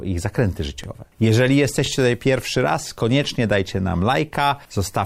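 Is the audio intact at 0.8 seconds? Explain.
No, not quite. Right around there, from 0.84 to 0.86 s, there's an overlapping chunks fault: the next 1-second chunk starts early, so about 23 ms of audio plays twice at the join, and you hear a quick click or stutter.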